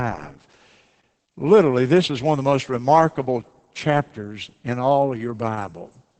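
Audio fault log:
Throughout: Opus voice compression. The speech is heavily damaged, muffled and slightly robotic, with nothing above 8.6 kHz, pointing to wideband SILK coding at roughly 10 kbps. Unlike a plain low-pass filter, coarse excitation coding adds a hoarse, buzzy texture.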